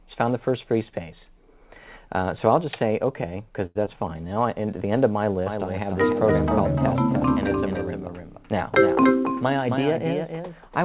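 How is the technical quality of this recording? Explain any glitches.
The recording has several glitches over a narrow call-quality band. Nothing is heard above 4 kHz, and the coding noise fits G.711 mu-law at 64 kbps on a WebRTC call path.

From 3.66 to 3.77 s there is a short stall from a late packet. A packet arrived late and the jitter buffer ran dry. The receiver held the last sound for 92 ms until the packet came, then resumed from the same point. Nothing is lost. One sound simply drags on too long, with a faint buzz. The delay grows by 92 ms.

From 3.85 to 3.88 s comes a short concealed packet loss. About 20 ms of audio never reached the decoder in time. The receiver covered the gap by extending the preceding sound for 9 ms and blending back into real audio. It comes across as a tiny smear or wobble right after the stall. A brief sound in that spot may have dropped out.

From 5.46 s to the end, a doubled audio track appears. 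A second full-band copy trails the original by about a third of a second, roughly 5 dB quieter. It has no reverb tail or room colour. It cuts in abruptly. This likely comes from the same audio being captured twice, once through a slower path. The result is a hard, dry echo of everything.

From 9.02 to 10.56 s a jitter buffer speed-up occurs. Too much audio had piled up in the buffer. The receiver trimmed many short pitch-period slices, about a tenth of a second in total. Playback runs at 106% speed while the pitch stays the same. That stretch sounds slightly hurried.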